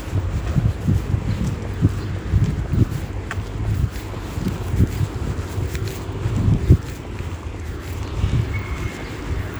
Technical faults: electrical switching spike

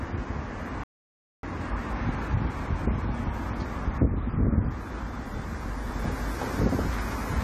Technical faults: AAC compression; playback stall

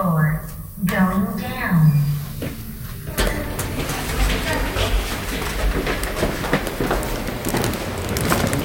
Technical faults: none

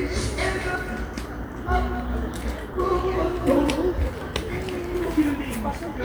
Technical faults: compressed frames skipped

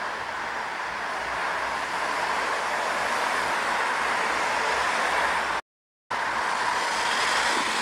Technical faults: playback stall; time-compressed catch-up

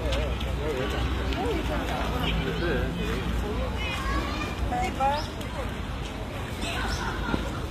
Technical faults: HE-AAC compression

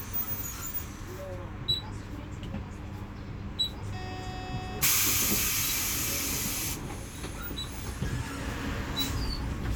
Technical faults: none

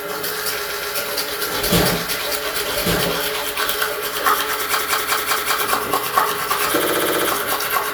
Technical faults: doubled audio track; repeated frames

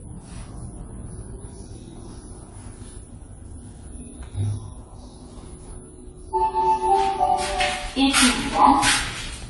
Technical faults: AAC compression

